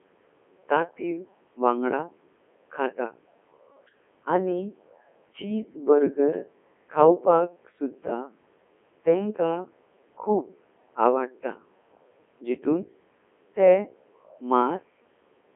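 Throughout, a Codec 2 vocoder resynthesises the speech from sine waves, heard as robotic buzz rather than warble, confined to 300 Hz–3.4 kHz, fitting its 3.2 kbit/s mode.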